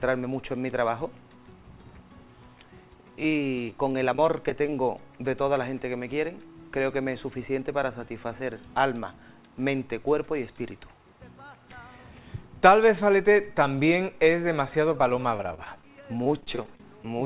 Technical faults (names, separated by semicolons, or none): repeated packet loss (robotic sound)